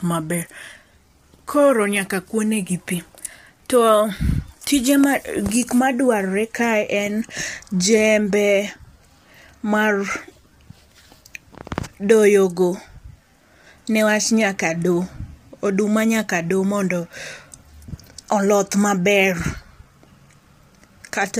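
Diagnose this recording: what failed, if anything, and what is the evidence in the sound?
The codec stage is the culprit, and the damage is plainly audible from start to finish. Voices sound rough and grainy, with noise filling the gaps between harmonics. That's likely low-delay AAC compression, AAC-ELD, whose short frames blur pitch detail at a bitrate that sounds like roughly 32 kbps.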